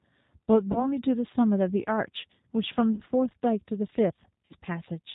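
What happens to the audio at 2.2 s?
At 2.2 s you're hearing G.729 codec damage, present through the whole clip: speech rebuilt from a vocal-tract model and sparse pulses, nothing above 4 kHz, plainly rough and synthetic.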